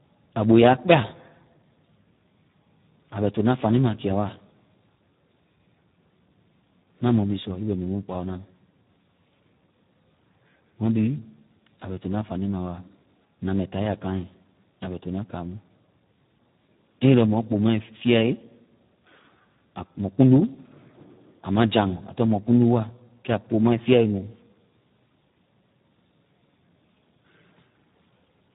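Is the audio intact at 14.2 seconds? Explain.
No. At 14.2 seconds the speech carries Speex codec damage, as it does throughout the clip. Speex is a CELP codec that models the voice with a filter and a coded excitation. Here very few bits are left for that excitation, which fits a low setting near 8 kbps. The damage is heavy. The speech sounds hoarse and noisy. Nothing remains above about 3.8 kHz, so the sound is dull and band-limited.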